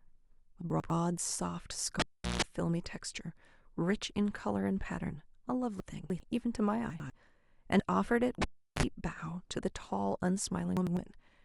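At 0.7 to 0.9 s, chunks out of order: a 100 ms block plays one slot late, so the speech briefly jumbles, with hard joins where the stream was reassembled in the wrong sequence. From 2.00 to 2.42 s, a cable pulled and plugged in: a pop, then about 0.38 s of near silence, a 0.16 s burst of 60 Hz mains buzz as the plug tip makes contact, and a second pop when signal returns. The same reordering recurs at 5.8 to 6.2 s, where a chunk arrives three slots late, and at 6.9 to 7.1 s. The cable fault repeats at 8.42 to 8.83 s, with roughly 0.37 s of dropout and a shorter 40 ms burst of 50 Hz buzz. One more late chunk garbles 10.77 to 10.97 s.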